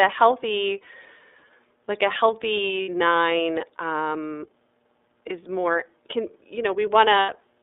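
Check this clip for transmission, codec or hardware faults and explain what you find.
Two kinds of fault are present: iLBC codec colouring across the whole speech clip, and two short dropouts concealed by the decoder.

Throughout, the speech sounds thin, boxy and slightly rough and synthetic, with no low bass and nothing above about 3.7 kHz. That is the iLBC codec: the line passes only about 300 Hz to 3.7 kHz, and each frame's excitation is coded on its own at low rate, leaving plainly audible grain. The band and texture fit iLBC's 13.33 kbps mode with 30 ms frames.

From 2.82 to 2.89 s, and again from 7.20 to 7.30 s just after "is more can you", the speech turns into a held, faintly buzzy, breathy vowel before snapping back. These are lost iLBC frames. The decoder filled each gap by repeating the last pitch cycle blended with noise. The lengths fit two and three lost 30 ms frames. Because every iLBC frame decodes independently, normal speech resumes straight after each gap.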